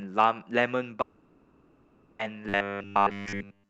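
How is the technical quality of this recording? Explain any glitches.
Not great: there are two clear glitches after the first second, both typical of a call connection struggling, on top of the call codec's top end, which stops around 8 kHz and fits Opus.

From 1.01 to 2.21 s there's a long network dropout. About 1.2 s of audio never arrived, and the receiver papered over the whole gap by stretching the last bit of sound into a fading buzz or hiss instead of going silent. When the sound comes back at 2.21 s, that chunk is simply gone. A network stall is the likely cause.

From 2.49 s to the end at 3.70 s you get robotic sound from repeated short buffers. Fresh audio was arriving too slowly, so the playback kept looping the last sliver, about 10 ms long, while the real material in between was dropped. Essentially all of that stretch is repeats, and the 10 ms loop imposes a flat 100 Hz buzz. 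The result is a rigid, metallic drone that only loosely tracks the speech. Late-arriving buffers are the likely cause.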